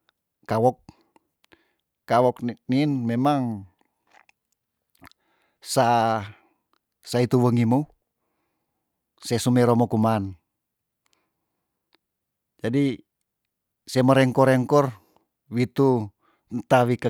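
No technical faults can be heard anywhere in the speech recording, which carries on without interruption or damage to the signal.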